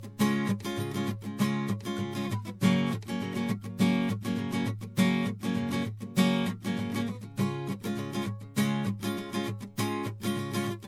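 The music sounds swirly, hollow and smeared throughout, with blurred attacks: generation loss, likely from a handful of MP3 passes, which fits re-encoding at around 96 kbit/s.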